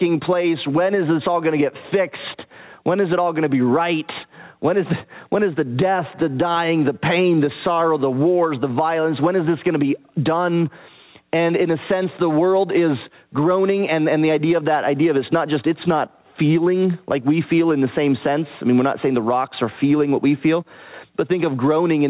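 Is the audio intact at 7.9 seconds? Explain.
No, gain pumping runs through the whole clip, 7.9 s included: likely an overdriven input with a fast limiter, so the gain swings roughly ten dB, squashing loud and soft parts closer in level.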